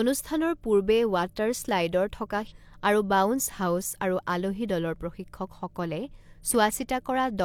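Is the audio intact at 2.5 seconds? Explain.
No. Between about 2.47 and 2.53 s the speech jumps forward abruptly, with a small blip at the join, and a stretch of the programme never arrives. This is a stream segment skipped, and the likely cause is that one segment of the segmented stream failed to load, so the player abandoned it and carried on from the start of the next segment.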